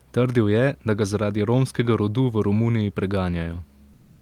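From 3.93 s to the end at 4.21 s, the background turns steady and featureless at the same level, comfort noise in place of the background, likely from discontinuous transmission during silence.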